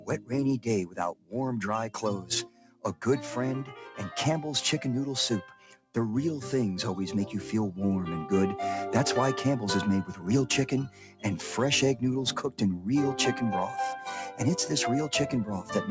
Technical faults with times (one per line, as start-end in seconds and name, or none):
0.00-15.90 noise suppressor applied to music or sounds
0.00-0.31 sound cut by the noise suppressor
1.14-1.34 sound cut by the noise suppressor
2.46-2.84 sound cut by the noise suppressor
5.57-5.95 sound cut by the noise suppressor
10.89-11.24 sound cut by the noise suppressor